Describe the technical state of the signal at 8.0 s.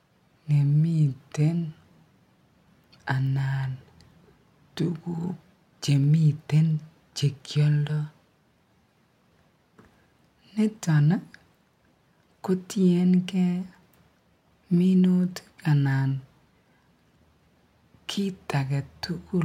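Dropped samples at 8.03 s: a handful of samples, a tiny fraction of a millisecond's worth, appear to be missing from the stream, so the waveform leaps straight from one value to a later one instead of moving smoothly between them. That discontinuity is heard as a single sharp click over the speech and shows as a thin vertical line through the spectrum. No audible sound is lost. The likely cause is a brief glitch in the sample stream.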